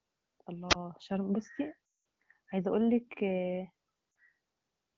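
At 0.69 s a wireless microphone squelch dropout occurs: the radio link fades, hiss swells briefly, then the receiver's squelch cuts the output to near silence for about 18 ms before sound returns by 0.75 s. The static that precedes the hole distinguishes it from a codec loss.

From 1.85 to 2.05 s lost AMR speech frames leave the decoder repeating its last good settings at falling gain, so sound drops to near silence within two frames and stays gone for the rest of the 200 ms, fitting a run of about ten 20 ms frames. There is no hiss, just a quick fall to near silence and a weak, rough return. A shorter 40 ms loss at 4.11 to 4.15 s likewise drops to near silence within its two frames. The wideband codec path underneath sounds clear with only light damage, pointing to one of its higher-rate modes.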